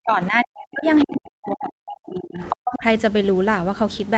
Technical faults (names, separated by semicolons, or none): speech suppressed in double talk; other side's voice leaking through